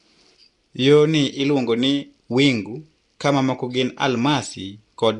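From start to finish the speech carries a rough, hissy halo and a smeared, underwater quality, with nothing above 10.7 kHz. This is most likely Nellymoser compression, Flash's old microphone codec, at a rate that points to around 44 kbps. Quiet bands that received no bits come back as noise, which gives the grainy fizz. A plain low-pass would sound dull but clean, and MP3-style damage swirls and warbles rather than hissing.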